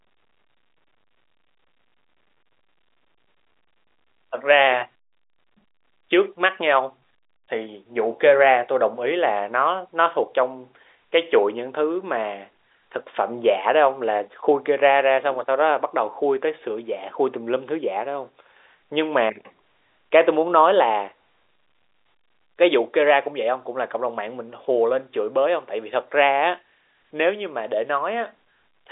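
No faults are present; the speech sits on an ordinary G.711 A-law telephone line at 64 kbps, passing roughly 300 Hz to 3.7 kHz with nothing above 3.8 kHz and at most a faint coding hiss.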